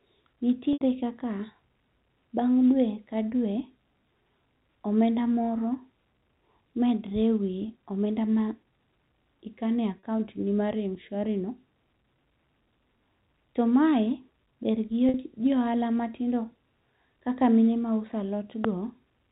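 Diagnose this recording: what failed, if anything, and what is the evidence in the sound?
Network packet loss, bridged by pitch repetition: gaps at 0.73 s (80 ms), 9.99 s (40 ms) and 15.09 s (50 ms) become brief buzzy held tones from looped pitch periods.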